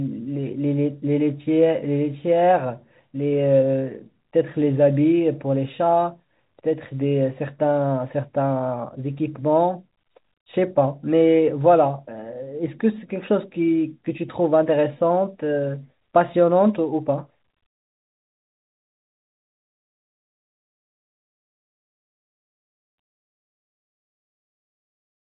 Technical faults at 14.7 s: none

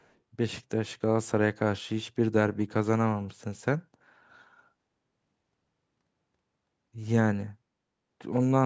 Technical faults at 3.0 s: none

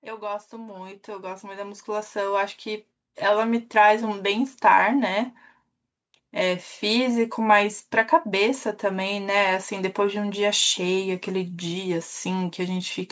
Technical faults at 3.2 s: automatic gain rising

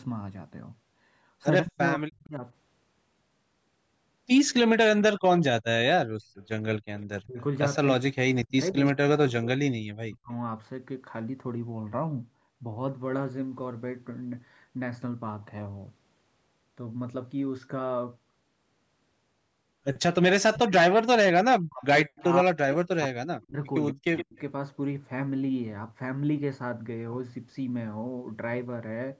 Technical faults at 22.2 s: speech suppressed in double talk; echo leak

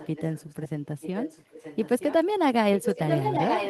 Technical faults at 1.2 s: echo leak

